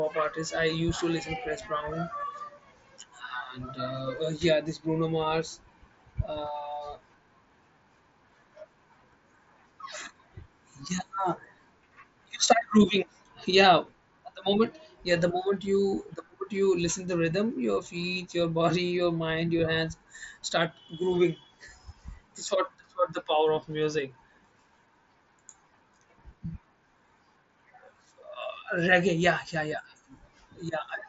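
There are no technical faults to describe in this speech recording.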